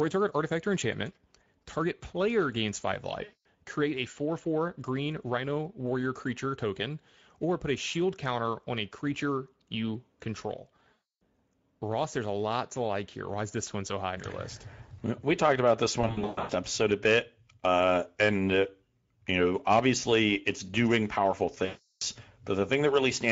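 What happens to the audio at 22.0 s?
Right after "obviously it's doing powerful", from 21.65 to 22.02 s, VoIP packet loss concealed by the speech codec takes over for 360 ms, which fits eighteen 20 ms frames. The decoder extends its last pitch and filter with falling gain, so the sound stretches into a buzzy tone or coloured noise that fades, and it stays weak or distorted briefly after packets resume.

Underneath, the whole clip carries plainly audible Speex codec damage, consistent with about 16.8 kbps. This CELP coder's limited excitation bits make the speech noisy and hoarse, and any content above 8 kHz is only a shaped, noise-like fill.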